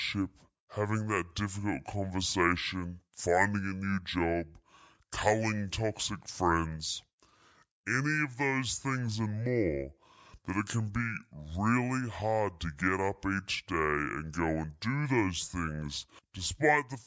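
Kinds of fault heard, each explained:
Wrong sample rate: the speech plays back slower than it was captured, with no conversion, so it runs at about two-thirds speed and sits roughly 7 semitones low, heavy and dragging, which fits 24 kHz audio being played at 16 kHz.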